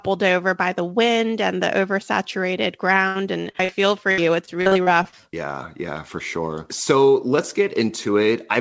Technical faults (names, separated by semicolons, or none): repeated packet loss (robotic sound)